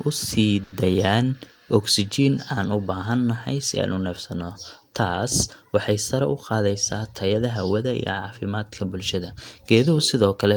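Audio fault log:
0.63–0.74 s, short stall from a late packet: A packet missed its playout time and the jitter buffer ran empty, so the receiver stretched the last bit of sound to fill about 90 ms until the packet turned up, then resumed exactly where it had stopped. Nothing is lost, but that sound is held too long, with a slight buzz or dip. Playback now runs about 90 ms later than before.
6.53–7.47 s, jitter buffer speed-up: The jitter buffer was holding more audio than its target, so the receiver trimmed it back by removing many short slices of one or a few pitch periods in quick succession, roughly a tenth of a second in all. Because whole pitch cycles are dropped, the pitch stays the same while the speech plays about 9% faster, and this stretch sounds briefly hurried.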